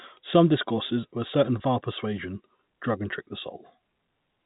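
Packet loss with pitch repetition occurs at 1.59 s in this speech. About 10 ms of audio went missing, consistent with a single lost packet, and the receiver filled the hole by repeating the most recent pitch period rather than leaving silence. Because the gap is so brief, the concealment is heard as a momentary held, slightly buzzy sustain before normal speech resumes, with no fade into silence. The telephone-band G.711 A-law coding around it limits the sound to below 4 kHz.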